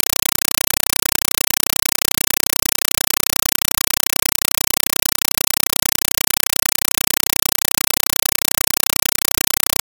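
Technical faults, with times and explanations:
Throughout, compressed stream played as audio: harsh chattering static of 5.33 ms noise bursts, 31.25 per second, which fits undecoded AC-3 data treated as samples.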